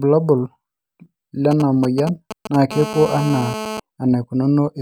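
From 1.51 to 2.56 s, GSM signalling bursts break into the speech: a galloping dit-dit-dit of short 217 Hz buzzes at roughly 10 dB below the speech. A nearby 2G phone is only exchanging short signalling transmissions with the network, and the audio circuitry rectifies each radio burst into sound. The interference arrives in clipped clusters separated by gaps, which is how it differs from a continuous hum or from the steady buzz that follows.

From 2.71 to 3.80 s, GSM phone buzz takes over, about 10 dB below the speech. The phone is now in a call and transmitting continuously at 217 bursts per second. The rectified pulses produce a hard, raspy 217 Hz tone packed with harmonics. Unlike the earlier bursts, it stays nearly steady without galloping gaps. Its coarse, buzzy timbre and its fixed 217 Hz rate set it apart from mains hum at 50 or 60 Hz.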